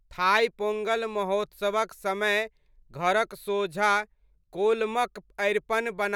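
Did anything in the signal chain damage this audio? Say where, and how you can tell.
No, nothing audible points to damage at any stage of the chain in this speech recording.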